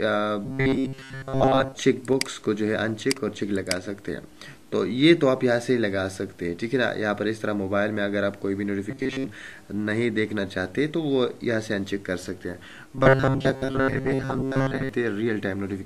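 From 0.45 to 1.75 s, 8.91 to 9.26 s and 12.95 to 14.89 s, robotic sound from repeated short buffers turns the audio into a rigid 134 Hz buzz, likely from a 7.5 ms fragment looped over most of each stretch. A spectrogram shows even horizontal harmonics, and the waveform shows identical repeating cycles.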